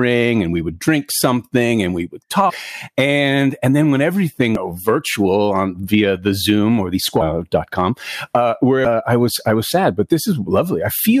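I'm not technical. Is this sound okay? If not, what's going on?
No. The speech has three brief glitches, each a chirp, click or short gap: from 2.49 to 2.51 s, from 4.55 to 4.57 s, and at 8.85 s. These are caused by damaged data in a compressed stream. A few bits of the compressed file were spoiled. When the player reached them it couldn't read that stretch properly, briefly lost its place, and produced a glitch before finding its footing again.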